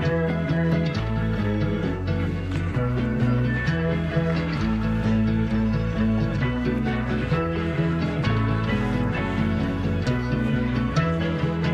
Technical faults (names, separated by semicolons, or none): timecode bleed